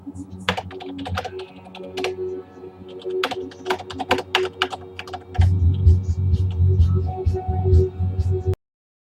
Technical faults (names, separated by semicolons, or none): cut-off end